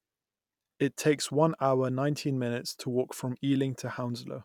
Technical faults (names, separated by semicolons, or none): none